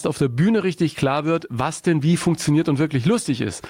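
Gain pumping runs through the whole clip: the level keeps ducking under each loud sound, a swing of roughly 15 dB, so loud and soft parts sit closer together and the sound is squashed. The likely cause is input gain set far too high, with a fast limiter or compressor clamping down on each peak. On a waveform the envelope looks flattened and evenly thick.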